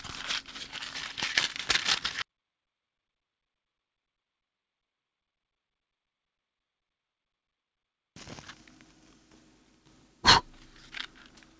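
No technical faults can be heard anywhere in this audio.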